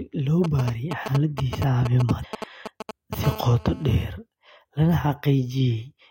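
A speech recording carries three technical faults. From 0.44 to 3.15 s, a galloping dit-dit-dit of short raspy buzzes sits nearly as loud as the speech: GSM signalling bursts, where a nearby 2G phone exchanges brief groups of radio pulses with the network and the audio circuitry rectifies them into sound. Inside that stretch, from 2.19 to 2.25 s, a brief glitch breaks through, the mark of damaged data in a compressed stream: corrupted bytes threw the decoder out of sync until it found the next valid frame header. Then, from 3.24 to 4.04 s, the bursts give way to a continuous hard, buzzy drone at 217 Hz, rich in harmonics and about 15 dB below the speech. This is GSM phone buzz, produced when the phone enters a call and transmits 217 bursts a second, which the circuitry demodulates into a steady tone.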